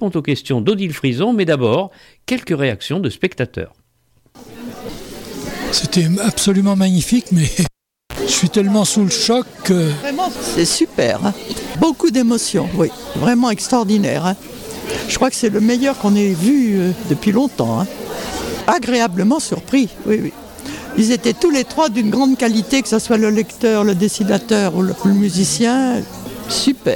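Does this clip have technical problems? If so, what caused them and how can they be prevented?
Yes. From 7.65 to 8.19 s a live cable is pulled and plugged in. There is a pop, about 490 ms of near silence that includes a 60 ms burst of 60 Hz mains buzz while only the plug tip touches the socket and the ground connection is open, and a second pop as the sound returns. A waveform shows two sharp spikes around a flat gap. A spectrogram shows vertical broadband lines with stacked 60 Hz harmonic stripes between them. Muting the channel before re-patching prevents this.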